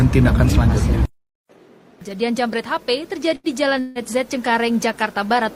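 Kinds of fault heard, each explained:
Burst of packet loss: Around 3.35 to 3.47 s, a short run of audio fails to arrive in time. The receiver covers the hole by carrying the last sound forward and letting it fade. That filler lasts about 82 ms and is heard as a brief held buzz or fading hiss. When the sound resumes, it has jumped ahead. About 80 ms of the original is simply gone.
Long network dropout: From about 3.80 to 3.98 s there is a longer break, likely caused by the network delivering nothing for a stretch. The last sound is stretched out and faded for about 156 ms, so a buzz or hiss hangs in place of the real audio. It never decays to silence before the sound returns. When it does return, it has skipped forward, with roughly 160 ms missing.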